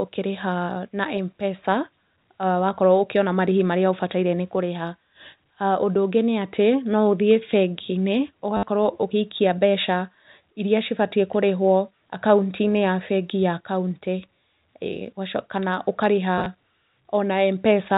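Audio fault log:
8.57–8.63 s, packet loss with last packet repeated: a short robotic stutter with a buzz near 100 Hz. About 60 ms of audio went missing, and the receiver replayed the previous chunk until fresh data arrived. The buzz rate fits 10 ms packets, and each replay restarts out of step with the pitch.
16.38–16.46 s, packet loss with last packet repeated: a scattered flutter rather than one solid stutter. Here 50 ms was lost in short gaps spread over 80 ms, none longer than 20 ms, and each gap was filled by repeating the preceding packet.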